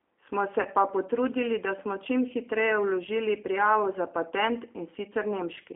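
Throughout, the speech sounds narrow, slightly rough and synthetic, confined to roughly 300 Hz to 3.5 kHz, with plainly audible coding damage. This is the G.729 codec: each 10 ms frame is rebuilt from a vocal tract filter, a pitch predictor and a few pulses, which fits an 8 kbit/s G.729A stream.

From 0.61 to 0.67 s the voice smears into a buzzy tone or coloured noise that fades. This is VoIP packet loss concealed by the speech codec. About 40 ms of audio went missing, which fits four lost frames, and the decoder extended its last pitch and filter at falling gain.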